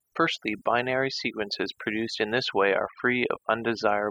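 From the first moment to the last, this speech has overdone noise removal running the whole way through. A noise reducer was pushed far too hard, so any frequency band sitting near its idea of the noise floor got pulled right down or shut off, and the softer parts of the voice got caught in that too. What's left is a lowered background full of little twinkling specks.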